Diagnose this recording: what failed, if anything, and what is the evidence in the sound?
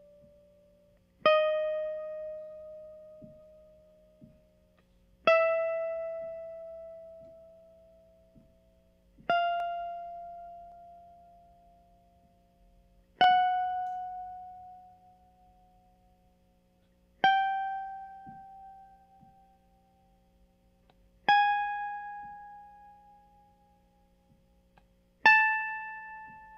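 The driver or buffer stage likely dropped samples, a fraction of a millisecond each. The waveform jumps, giving single sharp clicks in the music at 9.60, 10.72, 13.24 and 19.20 s.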